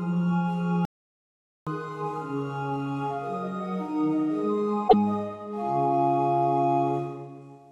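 Audio with two faults. From 0.85 to 1.67 s the sound cuts out for about 0.82 s mid-flow, then resumes. This is a playback stall, likely the player running out of buffered data or its output thread being blocked, leaving silence until it recovers. From 4.85 to 4.94 s there is a short chirp, click or hole characteristic of damaged data in a compressed stream. Corrupted bytes there cause the decoder to misread frames, lose sync and resume at the next valid frame header.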